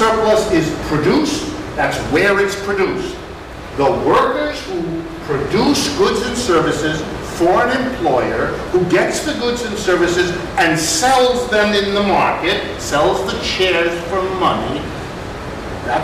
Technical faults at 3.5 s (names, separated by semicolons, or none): bit error spike